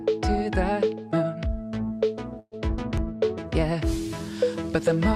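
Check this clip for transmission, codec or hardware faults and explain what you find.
Two faults stand out, both close together in the middle of the clip.

From 2.39 to 2.55 s there is a burst of packet loss: about 120 ms went missing. The receiver held and faded the last sound, then fell silent for 40 ms. On a spectrogram, frozen, dimming bands are followed by a blank gap.

At 2.98 s a small jump is likely a dropped buffer (overrun), skipping a few milliseconds. The waveform shows a sharp step with no silence.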